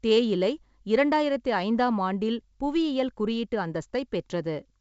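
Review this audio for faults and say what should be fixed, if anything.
Nothing needs fixing in this speech clip. It carries G.722 wideband telephone coding at 64 kbit/s, with the band reaching up to about 7.7 kHz and any trace of the coding faint at most.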